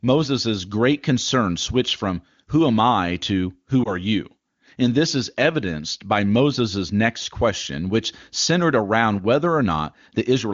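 Just after "am I to who", at 3.84 to 3.90 s, there are lost AMR speech frames: one 20 ms frame failed its checksum. The wideband decoder filled the gap by reusing the previous pitch and vocal tract settings at lowered gain, heard as a brief dip or warble.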